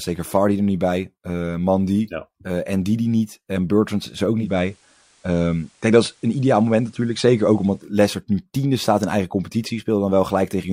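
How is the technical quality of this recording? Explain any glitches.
The recording has one glitch, a digital radio blend to analogue. From 4.32 to 7.97 s, after "is er" and ending before "nu tiende staat in", the receiver cross-fades over about 275 ms to the FM signal. Hiss rises to roughly 40 dB below the speech, and the level shifts about 1 dB. On a spectrogram there is a faint noise floor beneath the speech.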